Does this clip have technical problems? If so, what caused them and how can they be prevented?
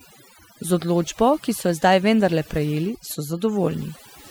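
Yes. Overdone noise removal runs through the whole speech clip. Frequency bands near the estimated noise floor are cut hard. Quiet parts of the voice vanish with them. The background becomes near silence with twinkling specks. Prevent it by using gentler reduction settings.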